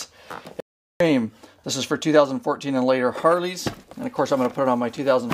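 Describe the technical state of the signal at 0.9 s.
At 0.9 s the signal sits inside an audio dropout to silence running from 0.60 to 1.00 s. The input was likely lost for those 0.40 s while recording continued writing silence, so the sound cuts off abruptly into dead silence, with no room tone, before resuming mid-flow.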